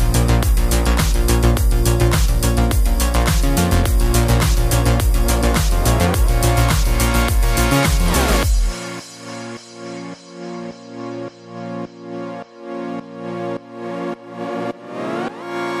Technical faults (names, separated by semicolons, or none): none